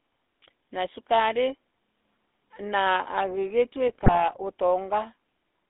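Right through, the speech has that buzzy, gravelly GSM full-rate codec roughness, squeezed into roughly 250 Hz to 3.6 kHz, which fits the old 13 kbps pulse-excited coder. Then from 3.88 to 4.26 s, GSM bit errors corrupt the decoder's parameters, so the sound breaks into squawks, pops and gargling.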